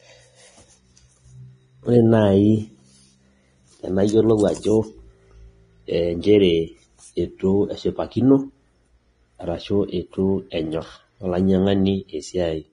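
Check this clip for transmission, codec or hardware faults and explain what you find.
Two faults are present: heavy lossy-codec damage across the whole clip, and one pre-echo near the end.

The codec damage runs from start to finish. The treble is grainy and hissy. Nothing is heard above about 10.5 kHz. Voiced tones sound rough, and consonant onsets are blurred. The likely cause is Vorbis compression at a low bitrate, roughly 28 kbps. At that rate the encoder cuts off the top band. It quantises the remaining high detail so coarsely that fine structure turns into noise of similar energy.

The pre-echo falls at 10.50 to 10.52 s. A short hiss spreads over about 21 ms just before a sharp onset, and the attack itself sounds softened. The codec shares its quantisation noise evenly across a transform block. Here the sudden loud event sits late in its block. The noise sized for that loud part leaks into the quiet moment ahead of it.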